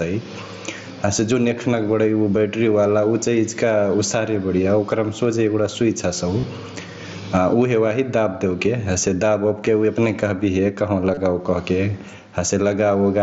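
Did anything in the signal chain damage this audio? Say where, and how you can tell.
Yes. At the call-processing stage, the gain appears to be set far too high for the microphone, and a fast limiter or compressor hauls it back down whenever the talker gets loud. That is the likely cause of the gain pumping heard throughout the clip. The gain swings by around 20 dB. Loud and quiet passages sit much closer in level than they should, so the speech sounds squashed.

On the Bluetooth link between headset and phone, concealed Bluetooth headset packet loss breaks the speech twice, at 6.40–6.43 s and again at 11.14–11.17 s. Each gap lasts about 30 ms, which fits a run of four lost frames. The receiver covers each hole by repeating a best-matching stretch of the last 20 milliseconds or so, so you hear a brief buzzy, held tone at full level, then a slight warble as real audio returns. The mSBC wideband codec underneath adds its light graininess on loud sounds.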